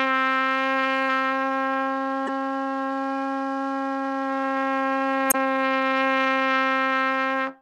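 At 2.24 to 2.29 s and again at 5.29 to 5.35 s, damaged data in a compressed stream produces brief glitches as the decoder misreads corrupted frames and resynchronises. Each shows as a roughly 56 ms disturbance on the spectrogram, with an abrupt waveform discontinuity.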